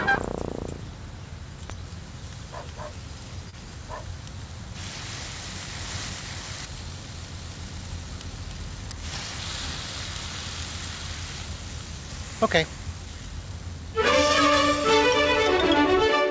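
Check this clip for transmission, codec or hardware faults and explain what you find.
One transmission fault turns up: a short concealed packet loss from 3.50 to 3.55 s. A slice of the stream missed the decoder in time, and the receiver filled about 26 ms by extending the preceding sound before blending back into the real audio. This is heard as a brief smear or wobble, and any short sound falling in that gap can drop out. The call path itself has a band limit with nothing above 8 kHz, consistent with G.722 at 64 kbps.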